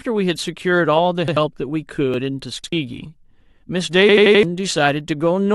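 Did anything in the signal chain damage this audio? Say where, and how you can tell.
Yes. The driver or buffer stage produced a repeated buffer at 1.28 s, 2.64 s and 4.09 s. Each time one piece of about 85 ms plays again with a hard join, which fits a 2048-sample buffer. At 4.09 s it repeats four extra times, a stutter that lasts until 4.43 s.

There is an overlap between stream segments at 2.14 s, in the streaming or playback stage. It sounds like a brief click or tiny skip. Two consecutive segments, here about 4 s long, were stamped as overlapping. The player trimmed real audio that was never doubled, so the waveform jumps.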